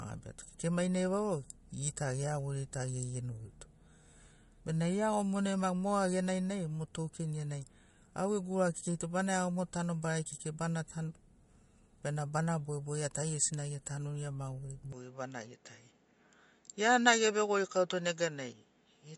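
Speech that's been through two encodes: everything stops at 11.2 kHz with MP3 smearing intact, likely low-bitrate audio saved at a high bitrate, something like 49 kbit/s re-saved at 192. Then at 14.93 s, with no gap and no real level jump, the band narrows to 7.6 kHz and a faint new hiss appears, likely the input switched to a poorer device through to the end.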